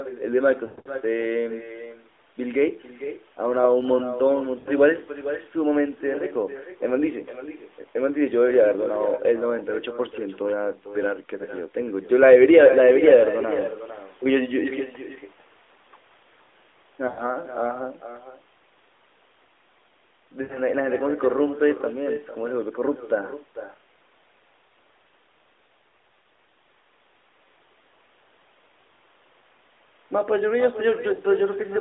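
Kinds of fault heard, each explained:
echo with no canceller: the far end's loudspeaker leaks into its microphone, returning a copy about 13 dB quieter roughly half a second later, far too late to be room reverberation.
lost AMR speech frames: the decoder stretches the last good sound and fades it, so brief dips and drawn-out fades appear near 0.66, 4.6, 17.08, 20.42 and 31.14 s rather than clean silent cuts.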